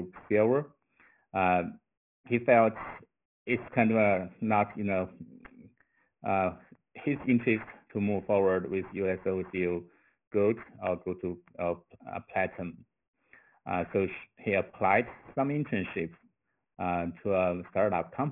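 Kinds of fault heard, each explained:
Aliasing: content above 3 kHz folds back as gritty, metallic false tones, fitting a drop to about 6 kHz without filtering; spectrograms show energy packed hard against 3 kHz.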